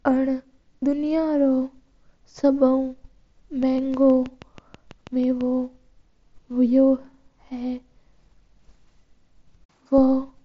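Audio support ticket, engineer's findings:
Train of clicks, 3.63–5.42 s: about ten near-identical pops at a steady 6.2 per second, peaking around signal level, audible in pauses too. Likely external interference or a struggling interface. Uniform shape and fixed pace separate it from random codec glitches. mSBC band limit near 7.7 kHz heard throughout.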